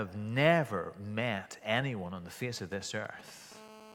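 From 2.57 to 3.53 s come GSM signalling bursts. A nearby 2G phone sends short groups of radio bursts, which the circuit rectifies into galloping 217 Hz buzzes roughly 20 dB below the speech.

From 3.55 s to the end, GSM phone buzz follows. The phone now transmits in bursts 217 times a second for a call, giving a steady, raspy 217 Hz buzz about 19 dB below the speech.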